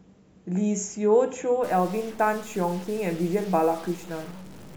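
From 1.64 s to the end, a single data bit likely got stuck, probably from a broken line or converter, shifting about half the samples by a step of around -40 dBFS. The result is a stuck bit: harsh, buzzy distortion, with pauses filled by noise.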